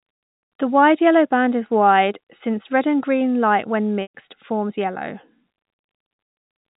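At 4.02 to 4.11 s the speech freezes into a brief buzzy hold. This is packet loss with pitch repetition: the receiver looped the last pitch period to bridge a 120 ms gap.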